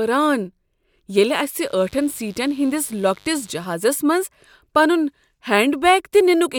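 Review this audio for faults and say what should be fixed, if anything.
Mains buzz comes in from 1.66 to 3.65 s: a raspy 50 Hz buzz sitting around 35 dB under the speech. Sharp switching spikes, twice per mains cycle, spray harmonics up into several kHz. Keep dimmers away from the audio path and check shielding and grounding.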